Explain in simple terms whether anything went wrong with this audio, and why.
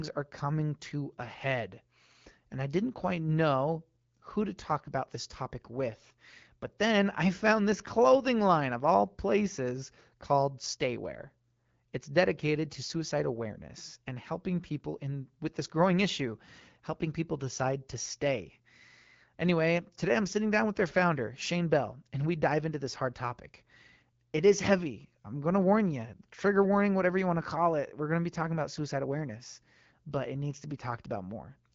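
Nothing went wrong; this speech has no faults to report.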